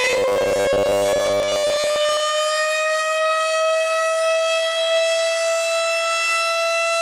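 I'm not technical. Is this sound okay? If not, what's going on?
No. Robotic sound from repeated short buffers runs from the very start, 0.01 s, to 2.2 s. The sound turns into a stiff, metallic buzz at a fixed pitch of 100 Hz. That pitch means a tiny 10 ms slice is being played over and over. The likely cause is that new audio was arriving too slowly, so the playback kept repeating its last slice. Most of that stretch is repeats, and the real audio in between is lost.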